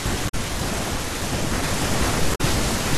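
Corrupted bytes in the compressed speech stream throw the decoder out of sync twice, at 0.25 to 0.35 s and 2.31 to 2.41 s, and each time it hunts for the next valid frame, producing a brief glitch. That is damaged data in a compressed stream. From 1.63 s to the end there is a doubled audio track. A second full-band copy, about as loud as the original, runs roughly half a second behind with no reverb or room colouring, and it cuts in abruptly. The likely cause is the same signal being captured again through a slower path, or an edit leaving two misaligned copies.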